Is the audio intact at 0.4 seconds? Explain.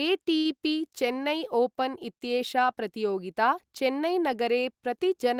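No. From 0.37 to 0.48 s there is a short stall from a late packet: the jitter buffer ran dry, so the receiver stretched the last sound for about 77 ms until the packet arrived. Nothing is lost, but that sound is held audibly too long.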